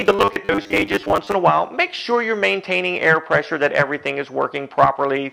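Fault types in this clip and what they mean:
Robotic sound from repeated short buffers: a rigid 100 Hz buzz over the first 1.35 s, likely from 10 ms chunks repeated about half the time, with no dropout gaps.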